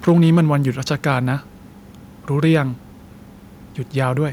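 From 0.07 to 0.41 s the loudest speech peaks turn harsh and crackly, with their tops flattened. This is microphone overload: the signal drives roughly 3 dB past the converter's ceiling, so a small share of samples, around one in twenty, are clipped flat, likely because the input volume is set too high. At 0.09 s, inside that burst, the speech and the room behind it drop suddenly by 2 dB. This is the microphone volume stepped down, likely the call software reacting to the clipping by lowering the device's input level in a single step. That cut is not enough to stop the overload, which continues until 0.41 s. From 2.54 to 2.56 s a short crackle returns on a peak, with about 2 dB of overshoot and roughly 3 percent of samples clipped. This is the same microphone overload, likely from an input level that is still too hot.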